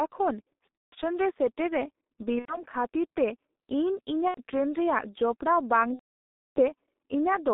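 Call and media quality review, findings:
G.723.1 codec, whole call: muffled, hoarse speech with smeared consonants. Line band roughly 250 Hz to 3.7 kHz. The coarse 30 ms frame-based voice model at 6.3 kbit/s cannot track fast articulation, so fricatives blur. On a spectrogram, nothing shows above about 3.7 kHz, with a hard ceiling, a thin low end, and formant bands that look blocky and stepped frame to frame rather than smoothly moving.

VoIP packet loss concealed by the speech codec at 0.78–0.96 s, just before "ᱨᱮ ᱥᱮᱴᱮᱨ ᱨᱮ". The decoder repeats its last pitch and filter while ramping gain down, which fits about five lost 30 ms frames. The result is a fading smear. On a waveform, it shows as a decaying patch that mutes.

Same at 2.39–2.63 s, after "ᱨᱮ ᱥᱮᱴᱮᱨ ᱨᱮ", and at 4.28–4.38 s, each consistent with about three frames gone. Short smeared stretches appear, with weak, distorted onset after recovery.

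Worst at 5.93–6.59 s, after "ᱡᱚᱯᱲᱟᱣ ᱵᱟᱝ". About 630 ms of concealment decays into near-silence. On a spectrogram, it shows as a short smear fading out.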